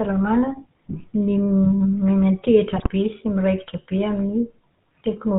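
GSM full-rate codec, throughout: the speech passes through a vocal-tract model excited by regularly spaced pulses, with most of the excitation detail discarded, which fits a 13 kbps full-rate stream. Nothing above 4 kHz survives, and the voice carries a plainly audible buzzy, gravelly roughness.

GSM bit errors, from 2.76 to 2.90 s: corrupted bits reach the decoder and scramble its filter, pitch and gain values, which points to a weak link damaging five frames. The spectrum warps and the level jumps, so the speech breaks into a brief squawking, gargling burst.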